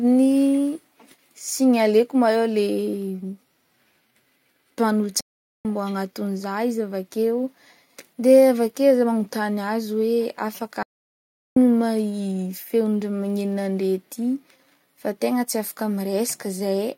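Speech that cuts out twice with playback stalls: dead silence from 5.21 to 5.65 s, roughly 0.44 s, then again from 10.83 to 11.57 s, about 0.73 s. It's likely the player starving for data or its thread getting blocked, then picking up afterwards.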